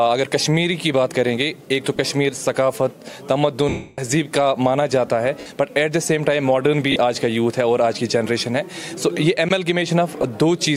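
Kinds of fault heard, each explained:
Lost LE Audio frames: LC3 fills dropouts with the last spectrum, signs randomised, so gaps smear into noise; the 0.29 s one fades toward silence.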